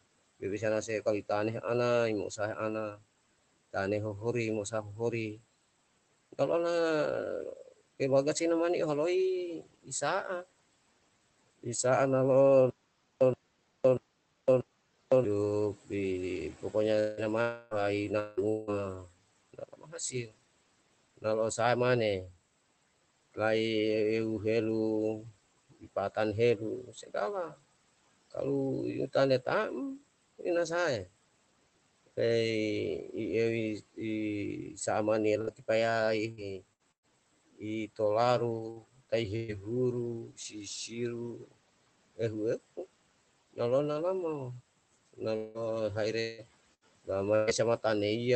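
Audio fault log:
0.02–8.01 s, 9.62–11.65 s, 19.06–23.37 s, 25.70–32.08 s and 33.95–45.20 s: speech cut by the noise suppressor. The suppressor mistook parts of the speech for background and pulled them down with it. The cuts reach about 18 dB, about 19 dB near 19–23 s and about 14 dB near 26–32 s. They total roughly half a second, a fifth of a second, 0.7 s, 0.7 s and 1.5 s in those stretches. Soft consonants and word endings sound swallowed or faint.
12.70–15.24 s: stutter with silent gaps. Playback stalled, likely from a stream or player underrun. At each retry it replayed its last 0.12 s fragment and then ran dry for 0.51 s. The same short burst returns four times, every 0.64 s, with dead digital silence between. The audio that should have filled those gaps never plays.
16.99–18.70 s, 35.41–37.06 s and 45.36–47.50 s: repeated packet loss (robotic sound). Packets kept going missing, and each hole was patched by stretching the preceding sound. 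The first stretch has 3 gaps, 0.54 s lost and the longest gap 184 ms, with 32% of it concealed. The second has 4 gaps, 0.3 s lost, the longest 113 ms and 18% concealed. The third has 4 gaps, 0.54 s lost, the longest 183 ms and 26% concealed. The result is choppy sound with pieces absent.
17.41–17.74 s: long network dropout, inside the first robotic stretch. Nothing arrived for 0.3 s, likely a network outage. The receiver continued the last sound for the whole gap, so a held, decaying buzz or hiss replaces the audio instead of silence. The sound picks up again further on, with that 0.3 s gone.
38.71 s and 39.36–39.51 s: burst of packet loss. Consecutive packets arrived too late or not at all, 60 ms at the first point and 120 ms at the second. The decoder extended the last sound and faded it across each gap, giving a brief held buzz or fading hiss. The audio then resumes with the middle section missing. 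All of this passes through the Opus call path, whose top end stops at about 8 kHz.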